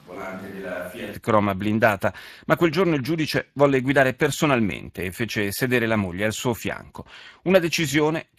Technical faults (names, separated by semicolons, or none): Speex codec; switch to a distant microphone